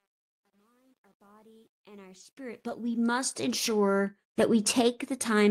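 At 2.69 s a single packet was lost, a lost packet rebuilt from error correction. The next packet carried a low-bitrate copy of those 20 ms, so there is no gap. That brief stretch sounds rougher and noisier.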